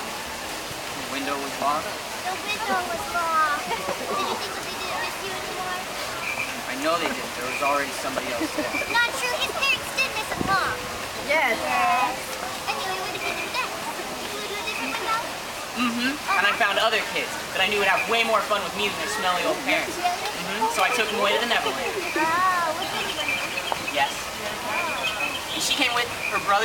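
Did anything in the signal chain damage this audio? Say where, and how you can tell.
Yes. The likely cause is dropped samples at the driver or buffer stage: a tiny fraction of a millisecond goes missing, so the waveform jumps to a later value. Each jump is a single sharp click, at 21.71, 22.94 and 24.24 s, with a thin vertical line across the spectrum.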